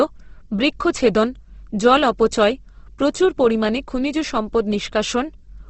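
From start to end the speech carries plainly audible damage from what is likely Opus compression. Nothing reaches above about 8.2 kHz, consistent with wideband operation. With too few bits to code every band properly, the encoder keeps each band's energy but refills detail with folded or noise-like content. Tones turn rough and grainy rather than swirly. The texture points to the codec's music (CELT) mode at a low rate, around 16 kbps.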